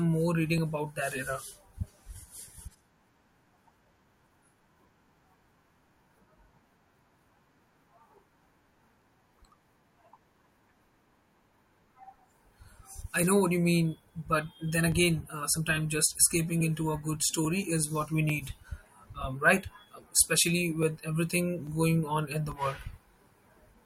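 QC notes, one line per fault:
0.58–23.36 s, clock drift buffer slips: likely mismatched clocks, roughly 700 ppm apart, drop or repeat about 30 samples every 0.84 s, causing regular clicks.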